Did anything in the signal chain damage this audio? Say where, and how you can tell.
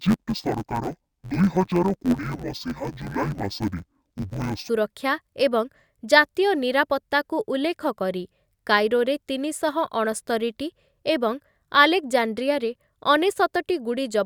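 Yes. From 0.0 to 4.69 s the speech sounds dull and robotic, with a buzz near 92 Hz. That is interleaved audio read as planar, a sample-format conversion fault. Each 10.88 ms block is split in halves, played together at half speed.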